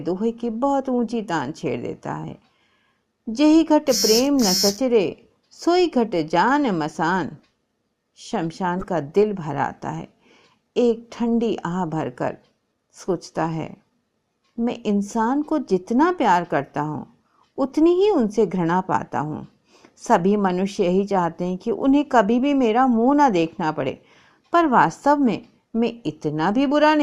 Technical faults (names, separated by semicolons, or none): corrupt frame decoded